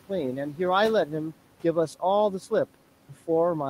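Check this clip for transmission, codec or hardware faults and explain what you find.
One fault runs through the whole speech clip: noise suppressor artifacts. The background noise drops away in the pauses and comes back up beneath the speech, so the noise floor seems to breathe. A noise suppressor is estimating which frequency bands hold steady noise and turning them down frame by frame, by about 12 dB here. The room noise it acts on sits about 20 dB below the speech.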